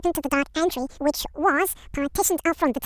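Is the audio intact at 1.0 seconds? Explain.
No. At 1.0 seconds, as across the whole clip, the speech shows a wrong sample rate: audio recorded for 16 kHz is played at 32 kHz without conversion, so it runs twice as fast and a full octave higher. Unlike a pitch shift or time-stretch, speed and pitch move together.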